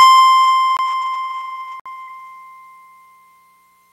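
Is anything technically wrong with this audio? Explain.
Yes. The music has two kinds of fault.

There are two blocks of digital silence, at 0.77 to 0.79 s (21 ms, which fits a 1024-sample buffer) and at 1.80 to 1.86 s (59 ms). The output likely wasn't filled in time, so the audio drops to silence without a fade. The second gap is heard as a brief hole. A waveform shows a flat line, and a spectrogram shows a blank vertical stripe.

A burst of packet loss runs from 2.01 to 2.10 s. The receiver stretched the last sound across about 57 ms while fading it down, then jumped ahead, skipping about 60 ms of music. On a spectrogram the frozen, decaying partials form smeared horizontal bands before an abrupt resumption.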